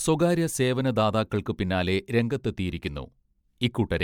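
Throughout the speech there is a swirly, hollow smearing, consonant onsets blur, and nothing sits above 19.9 kHz. That is generation loss, likely from around seven successive MP3 encodes near 160 kbit/s, each pass requantising on a shifted frame grid.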